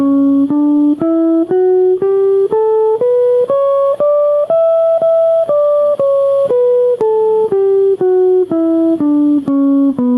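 Gain pumping runs through the whole music clip: the level swells in the quieter gaps and ducks by around 10 dB under each loud passage, squashing the dynamics. The likely cause is input gain set far too high, with a fast limiter clamping it down.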